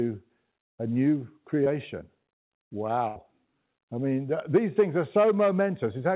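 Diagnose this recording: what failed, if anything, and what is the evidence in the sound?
A short concealed packet loss occurs in the network stage at 1.64 to 1.68 s. The speech briefly smears there. About 20 ms never arrived in time. The receiver bridged it by extending the preceding sound, then blended back into real audio.

A burst of packet loss follows at 3.08 to 3.18 s. About 80 ms was lost in transit. Concealment held the last sound and faded it, giving a brief buzz or hiss. The speech then resumes further on, with that stretch gone. Through the G.711 call path, nothing is heard above 4 kHz.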